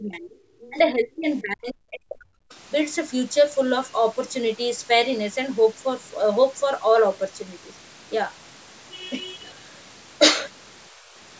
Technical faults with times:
0.00-2.49 speech suppressed in double talk
0.62-0.70 other side's voice leaking through
10.93-11.14 background gated by the echo canceller

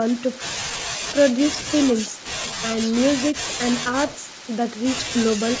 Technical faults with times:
none

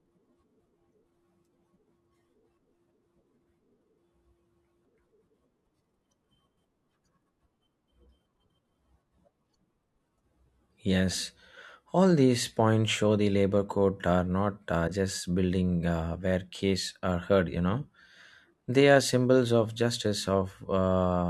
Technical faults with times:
none

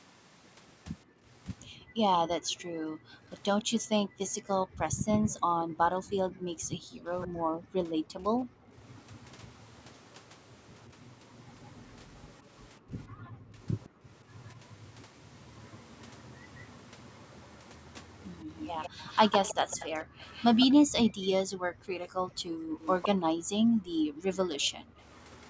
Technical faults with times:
1.05-8.71 background gated by the echo canceller
3.59-3.64 echo leak
6.06-7.28 echo leak
8.83-20.74 echo leak
12.80-14.05 background gated by the echo canceller
20.05-24.98 background gated by the echo canceller
22.30-25.50 echo leak

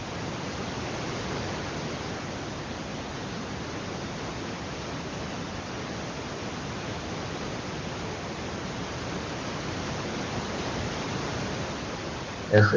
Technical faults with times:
none

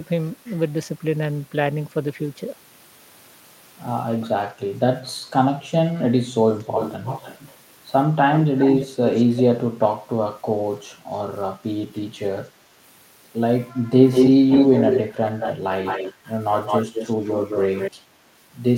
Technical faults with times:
6.61-7.54 echo leak
8.34-9.42 echo leak
14.11-17.91 echo leak

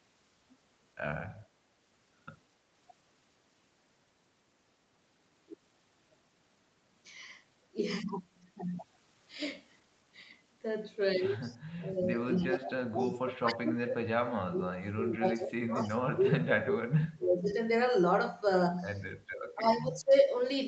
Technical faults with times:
11.41-11.57 echo leak
11.78-17.50 speech suppressed in double talk
12.36-12.45 echo leak
15.83-15.89 echo leak
19.23-20.31 speech suppressed in double talk

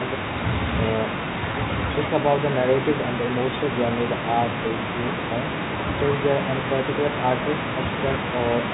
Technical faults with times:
1.52-1.54 packet loss with pitch repetition
4.68-4.70 packet loss with pitch repetition

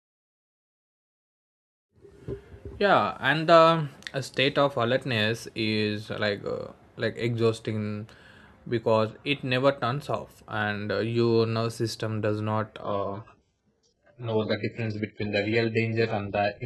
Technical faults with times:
12.83-16.65 adaptive stream at a lower bitrate

